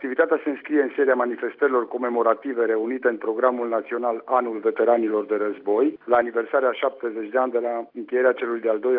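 No dropouts, clicks, distortion or timing errors are audible anywhere in the clip.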